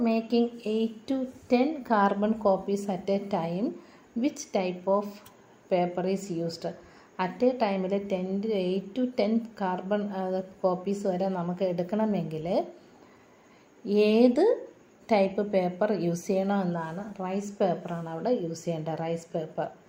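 No technical faults are audible anywhere in the audio.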